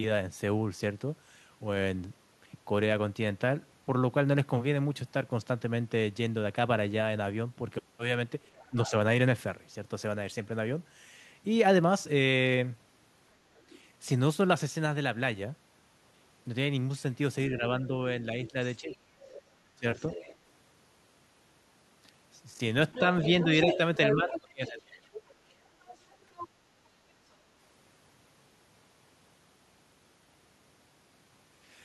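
From 8.58 to 8.91 s the other side's voice leaks through at about 15 dB under the talker. It is faint near 13.6 s, returns at 17.86–20.36 s, and is nearly as loud as the talker at 22.93–26.48 s. This is likely loudspeaker echo the canceller missed. Speech is suppressed in double talk at 8.7–8.93, 17.56–19.99 and 22.55–25.09 s. The talker dips by up to about 20 dB, likely from the canceller ducking both voices.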